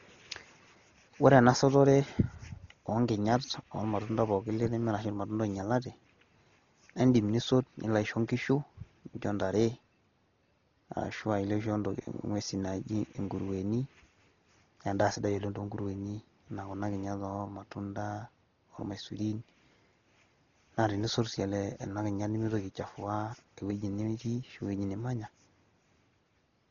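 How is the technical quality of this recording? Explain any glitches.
The technical quality is poor: heavy codec damage runs through the whole speech clip.

Dolby Digital compression, throughout: the sound is dull, with nothing above 7 kHz and a rough, fluttering noise clinging to tones. The likely cause is an AC-3 encoder starved of bits, which fits a rate near 32 kbps. It narrows the band and leaves many frequency lines without mantissa bits, so the decoder fills them with dither noise.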